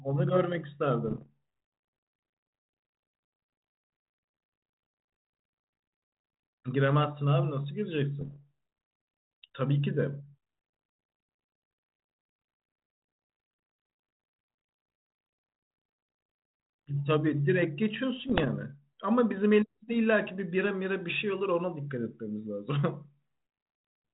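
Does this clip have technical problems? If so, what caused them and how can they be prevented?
Yes. There are bit errors on an ADPCM link. Bits in the stream were flipped at a rate somewhere under one percent, in bursts from 1.06 to 1.27 s, 8.21 to 8.45 s and 18.19 to 18.48 s. The band-limited telephone sound fits 32 kbit/s G.726. Each wrong bit knocks the decoder's step size and prediction off course, so the error lingers for some milliseconds instead of staying one sample long. That makes pops, rough crackly bursts and brief jumps in level. Preventing this means improving the radio or line conditions and using error detection with concealment, so corrupted frames are muted or replaced.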